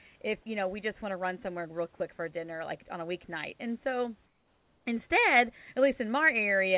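Sound dropped by the voice detector at 0.42 to 0.46 s in this speech clip: for 40 ms, just before "you know we just", the audio gives way to flat noise and about 30 ms of real sound is lost. The likely cause is that the sender's voice detector judged the sound there to be background, stopped transmitting, and the receiver filled the gap with comfort noise until the detector triggered again. Comfort noise in place of the background appears from 4.26 to 4.86 s. For those 600 ms the room noise, which sits about 41 dB below the speech, is replaced by a steady, featureless hiss about 4 dB quieter than the real background. This is likely discontinuous transmission: with no speech detected, the sender paused and the receiver synthesised noise roughly matching the room's spectrum. Across the clip the call path carries nothing above 4 kHz, which fits a narrowband telephone codec.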